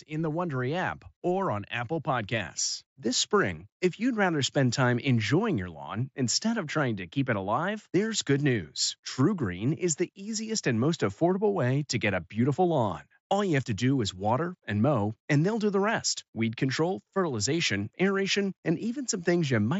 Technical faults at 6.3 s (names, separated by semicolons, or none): none